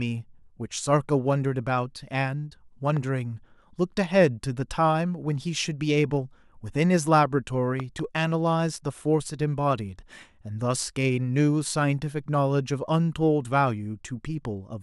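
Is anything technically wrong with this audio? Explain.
Yes, the speech carries loud pops at 2.97 to 2.99 s, roughly 5 dB above the signal, and at 7.80 to 8.01 s, a double thump nearly 10 dB up. These are likely voltage spikes from a switch or static, shaped by downstream circuitry. Unlike a dropout, the speech continues unbroken underneath.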